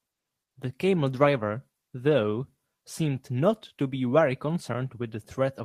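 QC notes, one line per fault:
No technical faults are audible anywhere in this speech recording.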